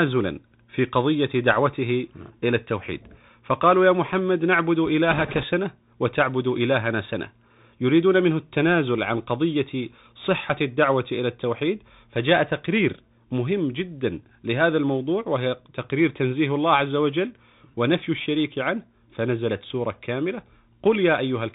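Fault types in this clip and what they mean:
Bluetooth CVSD headset codec: Throughout, nothing passes above 4 kHz, s sounds turn scratchy and a granular hiss sits underneath, the granular noise and slope-overload grit of a 64 kbps one-bit coder rather than clean band-limiting.
Bit errors on a Bluetooth voice link: From 5.11 to 5.44 s, a brief rushing crackle at an error rate of a few percent, with no sharp loud clicks like digital dropouts.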